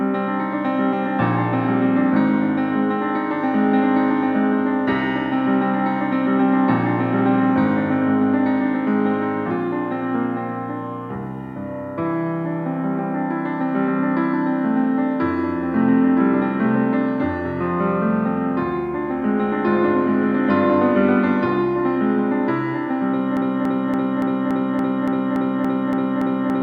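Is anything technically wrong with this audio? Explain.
Yes. From 23.37 s to the end, the sound locks into a broken-record loop: a fragment about 0.28 s long repeats exactly, back to back, 11 times, so the same brief snippet stutters with mechanical regularity instead of continuing. The likely cause is a stall in the player, encoder or stream, which then kept resending the last piece of audio it held. Whatever should have played during those final seconds is lost.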